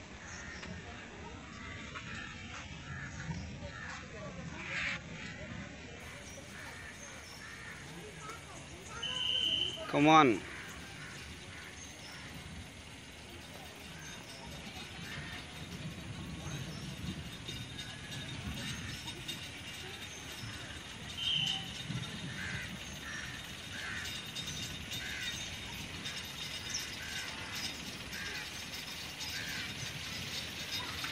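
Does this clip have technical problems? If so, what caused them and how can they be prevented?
Yes. The clip shows an adaptive stream starting at a low bitrate: the player opened on a cheap rendition to start fast, then switched up once it had gauged the connection. From 0.0 to 6.0 s nothing sits above 8 kHz, so the top end is dull or synthetic and codec smearing is stronger, which fits a very low-rate HE-AAC stream. At 6.0 s the quality jumps without a gap. Starting on a mid-tier rendition, or buffering briefly before playback, would prevent it.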